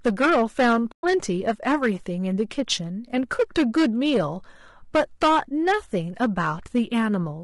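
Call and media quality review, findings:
Hard clipping, throughout: a gain stage drives the signal about 11 dB past full scale, so around one sample in twenty is cut flat. The flat tops add high harmonics, giving harsh fuzz on every loud syllable.

Codec roughness, throughout: likely low-delay AAC compression (AAC-ELD). Its short frames resolve pitch harmonics poorly, and the damage is plainly audible, which fits a bitrate near 32 kbps. Speech sounds grainy and rough, with noise between harmonics and a synthetic-sounding top band.

AAC frame loss with muting, 0.91 to 1.04 s: packets dropped and the decoder zeroed the missing spectrum, a 120 ms gap consistent with about six lost frames. Overlapping windows fade out and back in, leaving a soft-edged hole.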